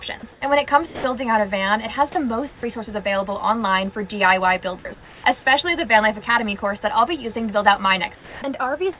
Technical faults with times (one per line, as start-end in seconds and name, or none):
0.32-0.41 comfort noise in place of the background
0.86-1.04 sound dropped by the voice detector
2.12-2.15 sound dropped by the voice detector
2.48-2.63 comfort noise in place of the background
2.61-2.63 onset clipped by the voice detector
4.79-4.85 sound dropped by the voice detector
4.94-5.24 comfort noise in place of the background
8.15-8.42 comfort noise in place of the background